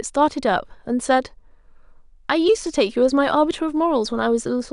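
Speech recording with no audible technical faults anywhere.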